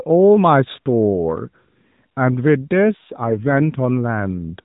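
From 2.74 to 3.81 s an AMR rate drop makes the speech rougher and more synthetic, suggesting the codec falling from 12.2 to roughly 5.9 kbps. The spectrogram keeps its 4 kHz ceiling with no gap, but the harmonics turn smeared and coarse.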